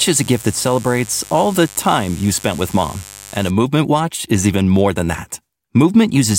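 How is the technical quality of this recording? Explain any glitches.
The speech is marred at the start by one fault. From 0.0 to 3.5 s a steady, raspy mains buzz sits roughly 20 dB below the speech. Sharp switching spikes twice per 50 Hz cycle spread harmonics up into the kilohertz range.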